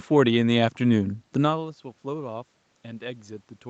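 No technical faults can be heard anywhere in the speech.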